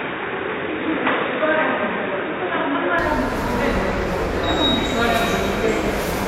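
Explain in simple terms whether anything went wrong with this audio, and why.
An input switched to a poorer device is the likely cause of the dull, boxy sound from the start of the clip until about 2.99 s. During that stretch nothing above 3.8 kHz gets through, so the bright, crisp part of the sound is missing, and a faint background hiss is added underneath. At 2.99 s the sound clears up abruptly, with no gap and no change in loudness, as if recording jumped to a better microphone.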